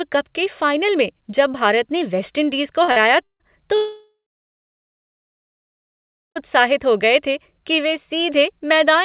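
At 2.84 to 2.91 s and again at 2.92 to 2.99 s there are two back-to-back short concealed packet losses. Each time roughly 40 ms of audio failed to arrive, and the receiver bridged the gap by extending the preceding sound before blending back into the real signal. The result is a quick smear or wobble rather than a gap. Unlike a dropout, no silence follows and the timing carries straight on.

From 3.24 to 3.43 s comes the first long network dropout. About 0.16 s of audio is replaced by a continuation of the last sound that fades away, leaving about 0.1 s of silence. The second is far longer, running from 3.76 to 6.38 s. A fading buzz or hiss gives way to about 2.2 s of silence, and the audio resumes at "हो गए थे कि" with the missing stretch simply gone. A network outage is the likely cause of both.

What separates these from the short losses is the audible hole and the lost content. Throughout, the band stops at 4 kHz, which fits the G.711 mu-law call path.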